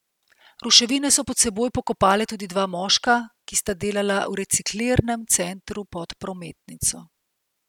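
No technical faults are audible.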